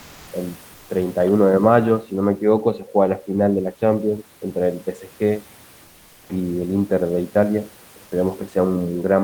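From 0.00 to 0.31 s and 0.73 to 0.89 s, comfort noise replaces the background: steady, featureless hiss about 1–2 dB quieter, likely from Opus DTX filling untransmitted pauses.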